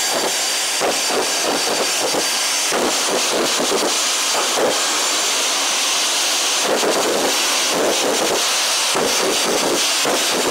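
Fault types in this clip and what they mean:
Wrong sample rate: The clip plays three times too fast and 19 semitones too high throughout. This fits 16 kHz audio played at 48 kHz without conversion.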